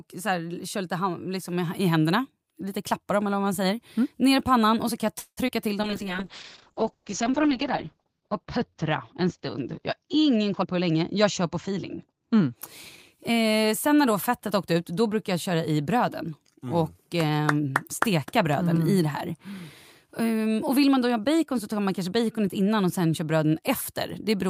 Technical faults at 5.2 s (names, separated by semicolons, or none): call audio freeze